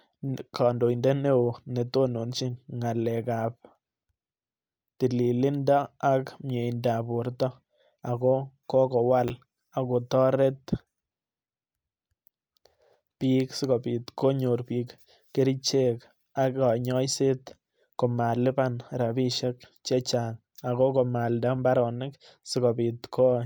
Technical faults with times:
9.28-9.30 chunks out of order

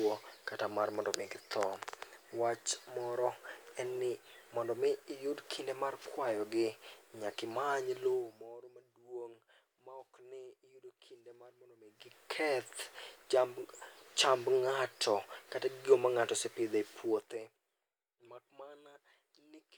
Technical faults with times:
none

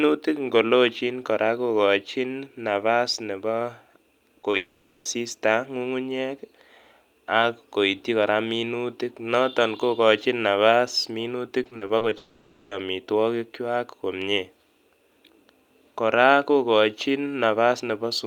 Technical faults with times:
4.41-4.55 short concealed packet loss
4.57-5.07 long network dropout
11.63-12.13 repeated packet loss (robotic sound)
12.17-12.73 long network dropout

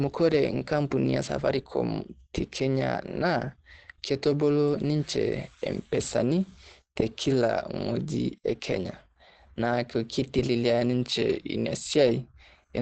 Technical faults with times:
0.00-12.81 Opus compression

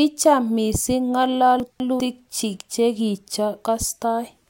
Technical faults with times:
1.60-2.00 chunks out of order

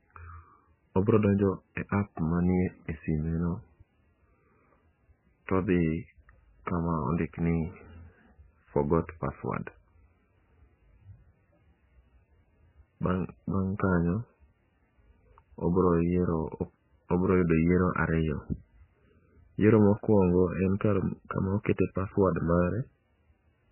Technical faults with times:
0.00-23.71 MP3 compression

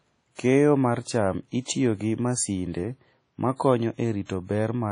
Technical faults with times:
0.00-4.91 WMA compression

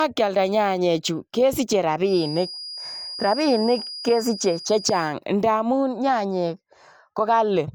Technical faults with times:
2.01-5.17 feedback whistle

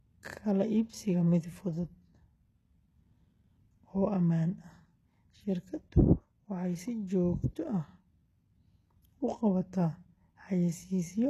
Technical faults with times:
0.00-11.29 HE-AAC compression

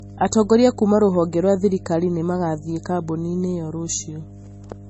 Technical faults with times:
0.00-4.89 mains hum
0.00-4.89 low-bitrate audio saved at a high bitrate

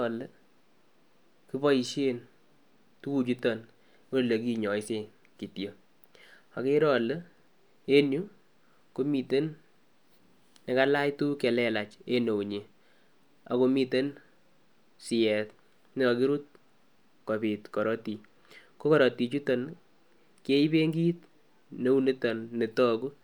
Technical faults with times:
none

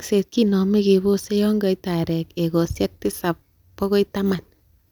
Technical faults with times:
none

